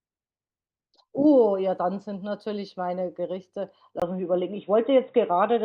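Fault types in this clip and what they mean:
Input switched to a poorer device: the recording input likely jumped mid-take to a different, lower-grade microphone or a headset's call profile at about 4.00 s, leaving a 20 ms gap at the switch. From there to the end of the clip, the speech loses everything above 3.8 kHz and turns dull and boxy. Its level shifts by about 5 dB, and a new background noise appears roughly 40 dB beneath it.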